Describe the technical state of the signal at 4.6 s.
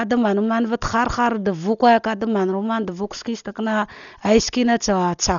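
At 4.6 s the signal is still passing through what is likely Dolby Digital compression, which affects the whole clip. The encoder appears starved for bits, which fits a rate of about 40 kbps, so it cuts the band off and leaves many frequency lines without real data for the decoder to fill with noise. The speech sounds dull, with nothing above 6.9 kHz, and heavy codec damage adds a rough, fluttering grain around voiced sounds.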